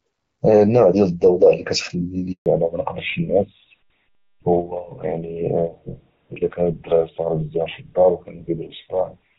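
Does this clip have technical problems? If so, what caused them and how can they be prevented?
Yes. A handover gap runs from 2.32 to 2.46 s, a 140 ms dropout. As the call moved from one network to another, no speech frames reached the receiver during the switch, so the sound fades out within a few tens of milliseconds and stays silent until the new link begins carrying audio. Whatever was said in that window is lost. Preventing it requires make-before-break handover, or a jitter buffer with packet-loss concealment that can bridge a short outage.

A fallback to narrowband begins at 2.46 s, right after the gap, and lasts to the end of the clip. Before the gap, the wideband HD Voice path is clear, with only light coding damage, consistent with AMR-WB at 12.65 kbit/s. After it, nothing above 4 kHz remains, and the speech sounds duller and rougher. That fits an older codec such as GSM full rate at 13 kbit/s. 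Keeping the call wideband requires the target network to support AMR-WB, so the handover does not renegotiate down to a narrowband codec.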